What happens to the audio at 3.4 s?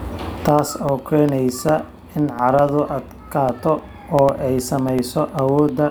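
A background task stalls the USB bus or audio driver every 0.1 s, causing periodic USB or driver dropouts from 0.09 s to 5.79 s, 3.4 s included. Each gap replaces about a millisecond of speech with silence, heard as regular ticks.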